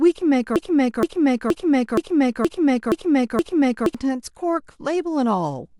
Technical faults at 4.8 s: none

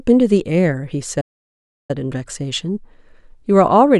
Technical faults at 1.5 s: playback stall

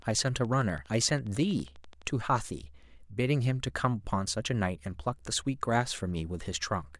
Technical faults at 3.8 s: none

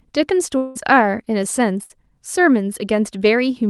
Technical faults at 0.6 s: long network dropout

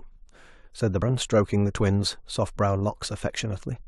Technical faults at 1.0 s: compressed frames skipped

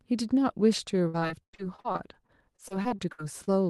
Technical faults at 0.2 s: none

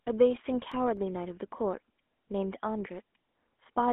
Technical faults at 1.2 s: GSM full-rate codec; CD scratch ticks

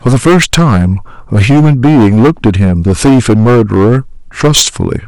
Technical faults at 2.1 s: hard clipping

